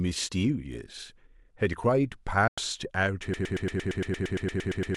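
A digital broadcast dropout at 2.48 to 2.58 s fades the speech to silence within about 3 ms. Roughly 96 ms of audio, consistent with three lost frames, simply vanishes before the sound returns.

A broken-record loop starts at 3.34 s and runs to the end. A 115 ms fragment repeats exactly, back to back, about 14 times, likely from a stalled stream resending its last buffer.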